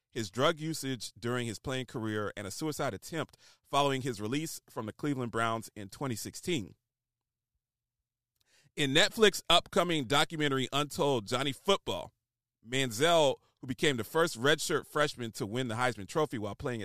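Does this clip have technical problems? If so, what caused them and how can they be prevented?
No, nothing in this speech recording stood out as a technical problem on listening, so there is no cause to trace and nothing to prevent.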